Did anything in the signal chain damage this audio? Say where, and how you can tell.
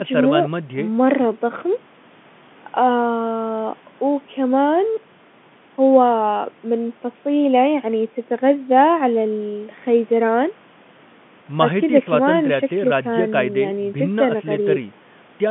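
No, the chain passes the audio without damage.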